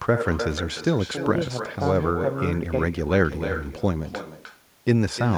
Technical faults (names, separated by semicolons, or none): echo with no canceller